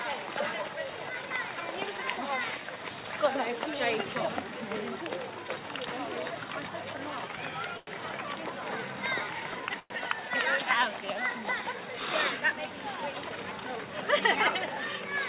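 The audio carries the narrowed, band-limited sound of a telephone-grade call path, with nothing above 4 kHz, which fits G.711 A-law at 64 kbps. At 7.77 to 7.90 s a sound is held too long, stretched by about 97 ms with a buzz or dip. This short stall from a late packet happened because the jitter buffer ran dry and the receiver extended the last sound. Nothing is lost. At 9.79 to 9.93 s the audio hangs for about 109 ms, continuing the last sound and ending in about 10 ms of silence before resuming where it stopped. This call audio freeze likely came from packets held up in transit that emptied the jitter buffer, inserting a gap rather than dropping anything. From 13.30 to 14.36 s the sound runs hurried at about 108% speed with unchanged pitch. This is a jitter buffer speed-up: the receiver cut repeated pitch-period-sized pieces, around a tenth of a second in total, to shed excess buffered delay.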